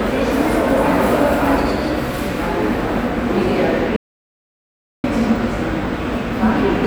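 At 3.96 s the sound cuts off into an audio dropout to silence. It returns at 5.04 s. The input was likely lost, leaving about 1.08 s of silence.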